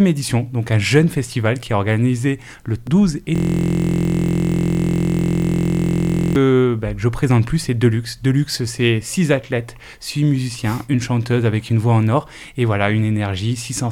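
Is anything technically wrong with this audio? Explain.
Yes. From 3.36 to 6.36 s there is a system hang loop. The system froze while the audio hardware kept replaying one 23.22 ms slice, which fits a 1024-sample buffer. Over a hundred exact repeats at 43.1 Hz form a steady, rough buzz.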